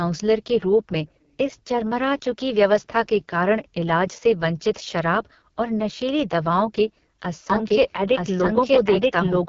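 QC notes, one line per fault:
Throughout: AMR wideband (HD Voice) codec. The speech was carried by the AMR-WB codec at one of its lowest rates, which fits 6.6 kbit/s, so the vocal tract model is starved of pulses and the speech turns rough and raspy, with nothing above about 7.3 kHz.
7.50 to 9.48 s: doubled audio track. The same speech was likely mixed in a second time through a slower path, so a full-band copy at roughly equal level trails by about one second, entering abruptly, with no decay or room colour, and running to the end.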